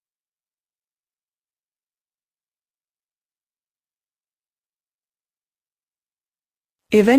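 Nothing in the audio calls for comment on the technical side, since there's no fault to be heard anywhere along the way.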